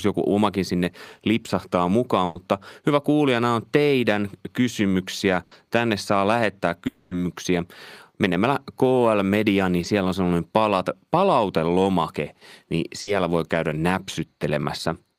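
A burst of packet loss at 2.25 to 2.37 s, between "joku omakin sinne lipsahtaa" and "hyvä kuulija nämä on", removes about 100 ms of speech. The receiver stretches the last sound into a fading buzz or hiss before the speech resumes further on. The same thing happens for 80 ms at 5.43 to 5.53 s.

At 6.87 to 7.13 s, right after "saa lähettää", a longer gap follows, likely a long network dropout. About 240 ms is replaced by the previous sound drawn out and decaying, and the speech returns with that stretch lost.

A short concealed packet loss at 9.81 to 9.85 s leaves a 20 ms hole. It is patched by extending the preceding sound and blending back in, which is heard as a brief smear.

At 13.01 to 13.09 s, after "sellainen palat palautelomake niin" and before "voi käydä", another burst of packet loss replaces 60 ms with a fading continuation.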